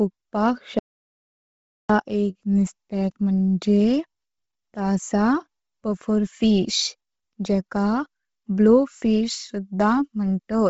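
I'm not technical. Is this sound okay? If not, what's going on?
No. From 0.79 to 1.90 s there is an audio dropout to silence: about 1.1 seconds where the sound cuts to total silence, with no background hiss at all. Whatever was said then is lost, most likely because the input briefly disconnected or failed.

For the whole clip the speech sounds breathy and grainy, and nothing is heard above 7.7 kHz, so it lacks crispness. This is heavy damage that most likely comes from Bluetooth LC3 compression, which squeezes the sound hard and fills in the top with noise.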